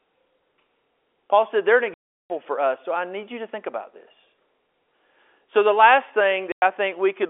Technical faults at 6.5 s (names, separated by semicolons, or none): packet loss filled with silence